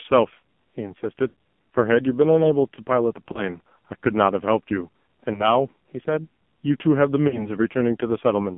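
Throughout, the speech sounds buzzy and synthetic, confined to about 150 Hz to 3.5 kHz. This is heavy AMR narrowband mobile codec damage, consistent with a low rate around 5.9 kbps. Brief warbles and drawn-out, fading dips at 1.28–1.35 s, 3.32–3.45 s, 5.34–5.51 s and 7.28–7.51 s are lost AMR speech frames, where the decoder reuses its last good settings at falling gain.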